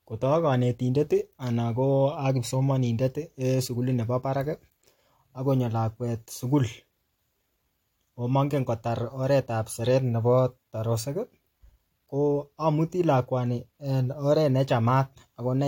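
Nothing technical stands out in this speech recording; there's no fault to point to anywhere in it.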